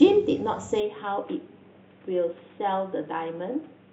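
Input switched to a poorer device, from 0.8 s to the end: the speech abruptly turns duller and boxier, with nothing above 3.8 kHz, drops about 5 dB, and gains a faint new noise floor, with no gap at the change, likely a switch to a lower-grade microphone.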